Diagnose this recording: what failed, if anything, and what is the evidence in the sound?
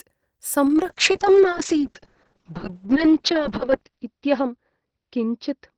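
A call bitrate drop, so it's the codec reacting to the network. From 0.67 s to the end the speech turns rough and muffled. The encoder fell from 32 to 6 kbps, sat at the bottom for about 2.35 s, and narrowed the band from 20 kHz to 6 kHz.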